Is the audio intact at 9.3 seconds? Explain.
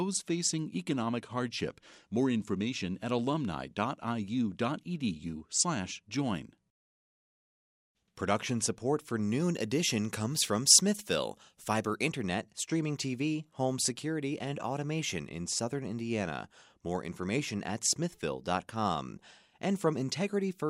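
No. From 9.2 to 12.1 s, just after "support for", pre-emphasis is left on: an uncorrected CD 50/15 µs treble boost, about 8 dB at 10 kHz, makes the sound thin, bright and sibilant.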